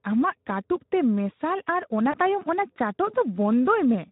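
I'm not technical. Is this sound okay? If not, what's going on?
No. The speech was squeezed through the Speex codec at a low quality setting, so the whole clip sounds hoarse and noisy. Around 2.11 to 2.18 s, just after "ᱛᱮ ᱢᱮᱥᱟᱞ ᱟᱨ ᱚᱱᱟ", a tiny piece of the call went missing in transit, a case of VoIP packet loss concealed by the speech codec. The decoder patched over the gap by guessing, which leaves a brief stretched, fading smear before "ᱛᱟᱭᱚᱢ ᱚᱱᱟ ᱪᱟᱴᱚᱜ".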